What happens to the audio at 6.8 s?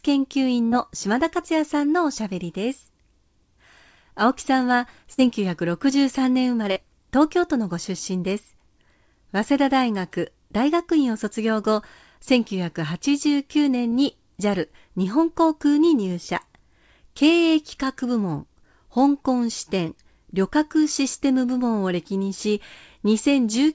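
Just before that point, from 6.72 to 6.78 s, there is a short concealed packet loss. About 40 ms of the stream arrived too late for the decoder, and the receiver covered the gap by extending the preceding sound, continuing its pitch where it was voiced or using shaped noise where it was not, before crossfading back into real audio. It comes through as a brief smear or wobble against the 8 kHz-limited bandwidth of the call codec.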